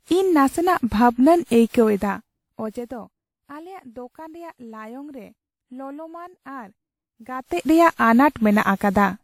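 Repeated lossy re-encoding is the likely cause of generation loss across the whole clip, consistent with several passes through WMA at 96 kbit/s, leaving the speech swirly and hollow, with softened attacks and nothing above 17.7 kHz. From 1.77 to 3.25 s, a gain change applied in unsmoothed 2 dB steps produces zipper noise: the level drops by roughly 20 dB at about seven steps per second, and each step ticks audibly. From 7.25 to 7.71 s, zipper noise returns as the level climbs roughly 20 dB in 2 dB steps, now at about twenty per second, so the clicks blur into a quick zipping.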